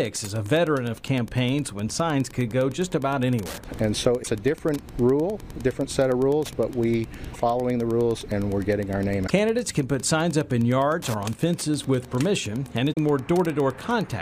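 A nearby Wi-Fi radio is coupling into the audio circuitry, which rectifies its beacon and the data bursts between beacons. The result is Wi-Fi interference under the whole recording: a steady tick about ten times a second, matching the 102.4 ms beacon period, with irregular rasps when traffic flows, sitting at about 25 dB below the wanted audio. Separately, the compressed stream carries damaged data in four places: 4.19 to 4.28 s, 7.30 to 7.36 s, 9.24 to 9.30 s and 12.89 to 12.97 s. At each point the decoder meets frames it cannot read correctly, loses sync and hunts for the next valid frame header. Each break is heard as a brief chirp, squawk, click or short hole lasting roughly 60 to 80 ms that cuts across the sound before decoding recovers.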